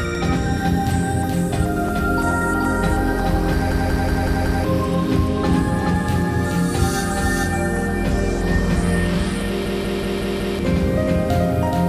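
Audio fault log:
Throughout, doubled audio track: a second full-band copy of the sound runs about 400 ms behind the first at roughly equal level, with no decay or room colouring. This is likely two capture paths feeding the mix, one slower than the other. It sounds like a hard, dry echo. On a spectrogram every event appears twice, shifted by the same fixed gap, and the waveform shows matching envelopes offset by that delay.
3.72–4.64 s and 9.66–10.59 s, system hang loop: each time, the audio freezes and a single 185.76 ms slice repeats exactly five times. The hardware kept cycling its ring buffer while the system stalled, and the length fits an 8192-sample buffer. The 5.38 Hz repeat gives a machine-gun stutter, and about a second of real audio is lost each time. On the waveform this shows as identical blocks tiled end to end, and on a spectrogram as a repeating pattern with sharp vertical seams.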